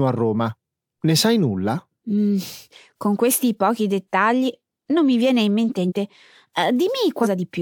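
Speech with two instances of compressed frames skipped: at 5.88–5.92 s, just after "mi viene in mente", roughly 0.3 s of audio vanishes, and at 7.22–7.27 s about a fifth of a second goes missing. Whole codec frames of about 46 ms each were lost or rejected by the decoder, so the sound jumps forward. On a spectrogram the harmonics break off and resume elsewhere.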